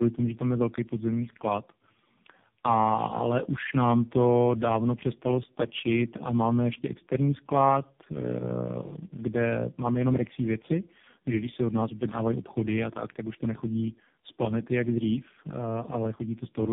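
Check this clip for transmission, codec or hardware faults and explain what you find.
The speech shows tandem speech coding throughout the clip. Content stops at about 3.7 kHz, which narrows the sound, and on top of that there is layered roughness and a warbling, smeared quality. The texture suggests three speech coders in a row, likely a low-rate AMR-NB stage, a CVSD-type stage and another AMR-NB stage. Each of these decoded the previous one's output and coded it again, so their errors stacked. A single low-bitrate codec would sound thin but cleaner. Here the rough, muffled distortion compounds.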